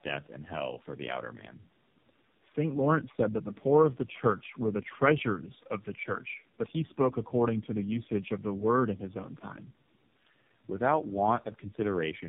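Throughout, the speech sounds rough, muffled and warbly, with nothing above about 3.7 kHz. This is tandem speech coding: the signal seems to pass through three low-rate speech codecs in a row, each re-encoding the previous one's degraded output, which fits a G.729A, iLBC and AMR-NB chain.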